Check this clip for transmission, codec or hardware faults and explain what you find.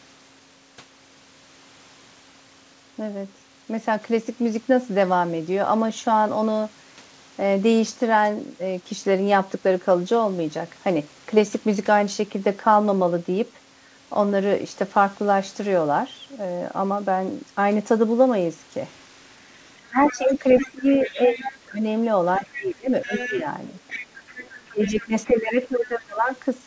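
Two echo-control faults appear in the last seven seconds of the speech, both tied to the far end talking over the near talker. The audio has no content above 8 kHz, which fits a wideband call codec.

Speech suppressed in double talk occurs at 19.8–21.84 s, 22.39–23.46 s and 24.61–26.32 s. The talker's level drops by roughly 20 dB at the deepest point in the first stretch and about 15 dB in the other two. About a second and a half is affected in the first and last stretches and well under a second in the middle one. The likely cause is an echo canceller that could not separate the local voice from the loudspeaker echo during overlap, so it attenuated everything.

The other side's voice leaking through comes in at 20.08–21.57 s, 22.35–22.67 s, 23.02–23.35 s, 23.79–25.07 s and 25.25–25.29 s. It sits about 15 dB below the main speech, except the brief last fragment, which is around 30 dB down. 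It is audible as a second voice that overlaps the suppressed passages. This is likely residual loudspeaker echo that the canceller failed to subtract from the microphone signal.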